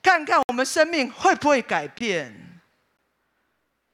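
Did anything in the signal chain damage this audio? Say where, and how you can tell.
Yes: blocks of digital silence at 0.43–0.49 s, 1.98–2.01 s and 2.97 s, flat waveform gaps with hard edges. The 21 ms gap fits a missed 1024-sample buffer.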